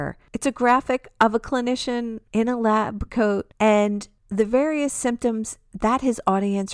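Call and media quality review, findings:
Nothing stood out on listening to the recording.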